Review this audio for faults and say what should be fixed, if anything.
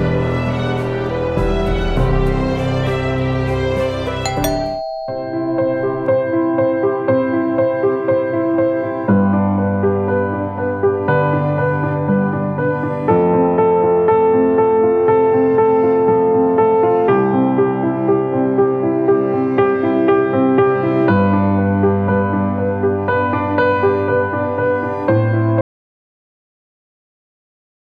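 At 25.61 s the sound stops abruptly and never returns: the last 2.3 seconds, running to the end of the clip, are silence with no trace of room tone or noise floor. That is an audio dropout to silence. The input signal was likely lost, through a disconnected device, a failed link or an accidental mute, while recording carried on writing silence, so whatever followed is missing. Securing connections and monitoring input levels during capture would prevent it.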